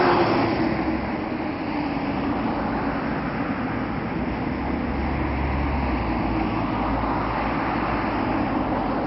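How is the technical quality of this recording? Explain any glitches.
The technical quality is poor throughout. The sound is dull and muffled, with nothing above 5.6 kHz, and it carries a gurgling, granular grain from start to finish. This is likely MP2 compression at a very low rate, consistent with around 32 kbps. MPEG Layer II divides the spectrum into equal sub-bands and, when it runs short of bits, switches whole upper bands off and quantises the remaining ones coarsely. That causes both the missing top end and the heavy, watery distortion.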